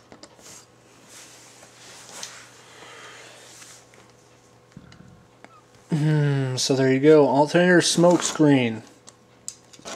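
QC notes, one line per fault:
Nothing stood out on listening.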